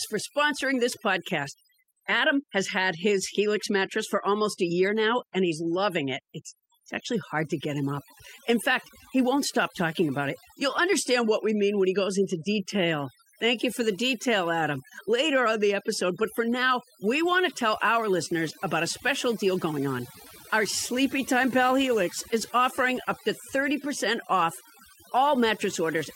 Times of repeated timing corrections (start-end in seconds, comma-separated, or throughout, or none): 0.13-25.97